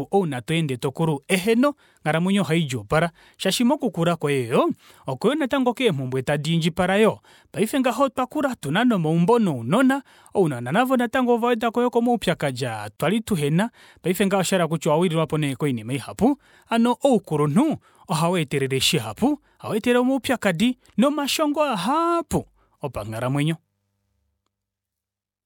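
At 12.96 to 13.00 s, after "ovawedako yoo komaupyakadi aa", the speech drops out for 34 ms before "tuhena paife ngaha oshahala": a gap at a join of encoded pieces, left by untrimmed encoder delay and padding. A spectrogram shows a thin blank vertical stripe with slightly smeared edges, and the waveform flattens briefly.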